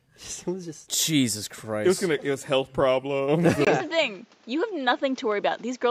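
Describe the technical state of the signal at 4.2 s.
At 4.2 s the system has most likely switched its input to a poorer device, a change that took place at 3.65 s and holds to the end of the clip. The replacement input passes nothing above 7.6 kHz, so the sound turns duller and boxier, with a different tone and a faint new noise floor well below the signal. The level stays about the same. A brief gap of about 20 ms marks the switch.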